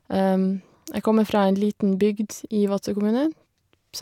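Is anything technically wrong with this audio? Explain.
No, nothing technically wrong can be heard here.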